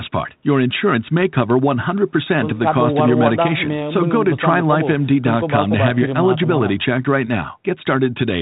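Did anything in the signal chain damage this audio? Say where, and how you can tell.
No, nothing in the signal chain damaged this speech. The G.726 ADPCM stage at 32 kbit/s is audible only as a telephone band that stops near 4 kHz, with a faint coding grain that follows the level of the speech.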